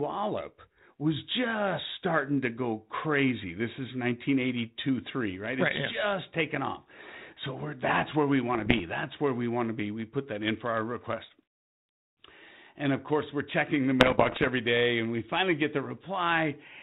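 Bit errors on an ADPCM link occur at 8.55–8.80 s, after "we're that's where we", at roughly half a percent, and more densely at 14.00–14.50 s, around 1.5 percent, between "course we're checking the" and "day and we finally". Each flipped bit derails the decoder's step size and predictor, so the 32 kbit/s G.726 sound breaks into pops, rough bursts and brief level jumps.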